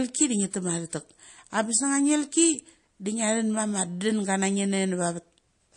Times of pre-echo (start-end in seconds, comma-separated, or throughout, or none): 0.51-0.53, 0.90-0.93